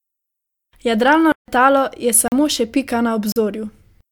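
At 1.32 to 1.48 s the speech drops into a block of digital silence lasting 160 ms. Samples were replaced by zeros, likely because the output buffer was not filled in time. The cut has no fade, so the sound stops and returns abruptly, with a short hole between. Two shorter 40 ms gaps follow, at 2.28 to 2.32 s, just before "še pika", and at 3.32 to 3.36 s, right after "še pika". These sound like briefer holes.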